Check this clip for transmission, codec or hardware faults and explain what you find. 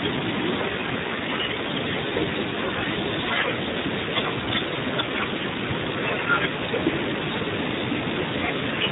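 The clip shows heavy Speex codec damage throughout. Speex is a CELP coder that models speech as a filtered excitation. Here so few bits go to that excitation that the speech sounds hoarse, noisy and edging toward robotic, which fits a low setting of around 8 kbps. Nothing sits above about 3.8 kHz. On a spectrogram that appears as a hard ceiling with smeared, grainy harmonics below it. The waveform looks rough rather than cleanly periodic.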